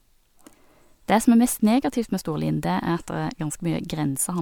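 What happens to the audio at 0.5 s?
Nothing goes wrong at 0.5 s; the audio plays through that moment intact, with no dropout, click, distortion or other fault.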